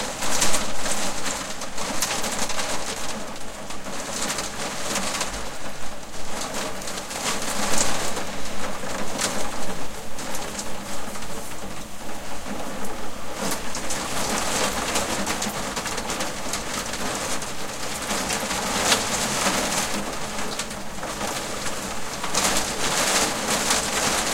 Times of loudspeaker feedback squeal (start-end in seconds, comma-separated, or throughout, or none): none